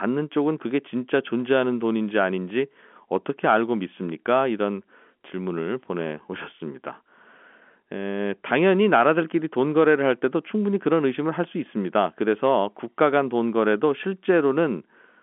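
No technical faults can be heard anywhere in the speech. It comes over a G.711 telephone coding path, so the sound is confined to the line band of roughly 200 Hz to 3.4 kHz, with at most a faint grain of quantisation noise riding about 38 dB under the signal and following its level.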